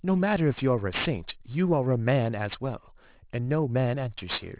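Aliasing runs throughout this speech: content above 4 kHz folds back as gritty, metallic sibilance roughly 15 dB down, which fits an unfiltered drop to an 8 kHz rate.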